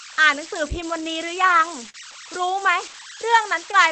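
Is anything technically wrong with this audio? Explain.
Yes, there are two faults in this speech.

Throughout the clip, there are converter idle tones. An undithered delta-sigma converter, given very small input, settles into repeating bit patterns. Here that leaves a whistle around 1.5 kHz in the pauses and grainy noise under quiet passages, about 14 dB below the speech.

From 1.89 to 1.95 s, there is short concealed packet loss. About 40 ms of audio never reached the decoder in time, so the receiver extended the preceding sound to fill the gap and then blended back in. The result is a brief smear or wobble in the speech.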